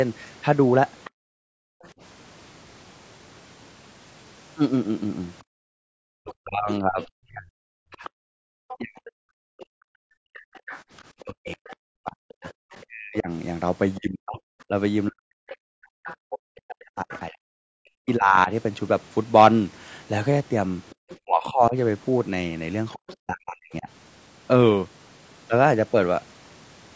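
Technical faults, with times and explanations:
Throughout: low-delay AAC compression. The speech has a plainly audible rough, grainy texture, with noise filling the gaps between pitch harmonics and a thin, somewhat synthetic upper band. The likely cause is AAC-ELD, the low-delay AAC used in calls, at a rate that fits around 32 kbps. At such a low rate the coder quantizes the spectrum coarsely and leaves audible noise. The call's microphone processing caps the band at 8 kHz, which is expected.
1.04–1.89 s, 6.31–17.2 s and 20.9–23.13 s: other side's voice leaking through. A second voice sits underneath the talker, about 20 dB below the speech in the first two stretches and about 25 dB below in the last. The leak is brief at first and runs for roughly 11 s in the middle stretch. This is likely residual echo. The far end played from the talker's loudspeaker, and the echo canceller did not fully remove it from the microphone signal, so traces of that voice remain.
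1.1–1.83 s and 5.43–10.61 s: background gated by the echo canceller. The room sound ducks sharply while the loudspeaker is active, dropping by as much as about 40 dB and then returning. In the first stretch the dip covers most of the range. In the second, the gating comes and goes in pieces totalling about a second and a half. The canceller clamps the microphone gain hard while it judges echo to be present, and releasing that clamp brings the ambience back.
6.16–23.88 s: speech suppressed in double talk. While the other side is also talking, the talker's own voice repeatedly dips, loses clarity or cuts out in fragments, with drops of around 40 dB. Together these cover roughly 7 s across this span. This likely comes from the echo canceller failing to separate the near talker from the loudspeaker echo during overlapping speech. It attenuates everything it cannot classify, taking the wanted voice down along with the echo.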